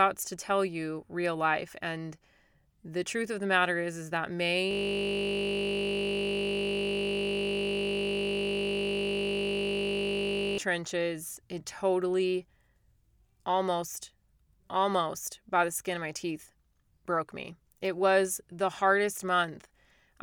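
Speech recording with a system hang loop from 4.71 to 10.58 s. The machine or driver froze while the sound hardware kept replaying the same 20 ms ring buffer, nearly 300 times over, so the speech stops dead and a steady 50 Hz buzz takes over. Mains hum at the same frequency would run under the speech throughout. This buzz replaces the speech outright, starts and stops abruptly, and carries the timbre of that frozen slice.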